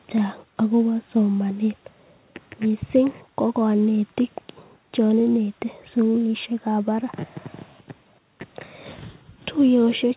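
Nothing stood out on listening to this speech, which comes through a G.711 mu-law call path with nothing above 4 kHz.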